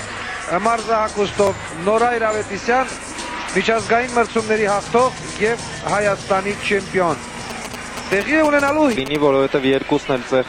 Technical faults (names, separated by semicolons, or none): block of digital silence; GSM signalling bursts